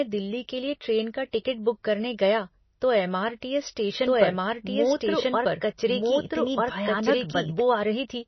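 From start to finish the speech sounds watery and swirly, with a plainly audible codec texture, and nothing is heard above 6 kHz, leaving it dull and band-limited. This is likely MP3 compression at a low bitrate, consistent with about 24 kbps. Short of bits, the encoder discards weaker frequency lines that flicker in and out between frames, and it removes the treble above a fixed cut-off.

From 4.06 s to 7.60 s, a second full-band copy of the speech runs behind the first, about one and a half seconds late and about as loud as the original. It has no reverberant tail or room colour, and it begins and ends abruptly. This is likely a doubled audio track, caused either by a second, slower capture path or by an edit that left two misaligned copies overlapping.

Between 4.97 s and 5.01 s, a brief burst of hiss spreads over about 35 ms ahead of an attack, which sounds softened and smeared. This is pre-echo. 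The transform codec spreads quantisation noise across an entire block, so when a sharp onset falls late in the block, noise sized for the loud part also fills the quiet moment just before it.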